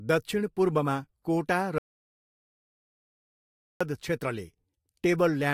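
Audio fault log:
1.78–3.81 s, audio dropout to silence: the input feeding the recorder was likely lost, perhaps through a disconnected device, a failed link or a mute, while writing continued with silence. Right after "दक्षिणपूर्वमा कोटा" the speech cuts off mid-flow and about 2.02 s of silence follows, with no room tone or noise floor, before the speech resumes abruptly. Whatever was said during the gap is lost.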